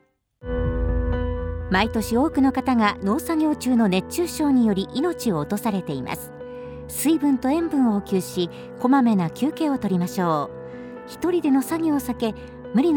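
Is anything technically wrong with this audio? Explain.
No, the audio shows no technical faults, and the signal stays continuous and stable across the whole recording.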